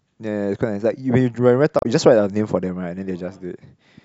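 At 1.79 s the compressed speech stream carries damaged data: a stretch of its bytes is wrong, so the decoder misreads the frames there, loses its place in the stream and has to hunt for the next valid frame header before decoding normally again. What reaches the ear is a short burst of garbled, blip-like sound lasting until about 1.86 s, roughly 66 ms, cutting abruptly into the speech.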